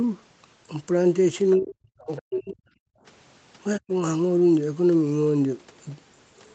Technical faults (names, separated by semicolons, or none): speech suppressed in double talk; other side's voice leaking through; background gated by the echo canceller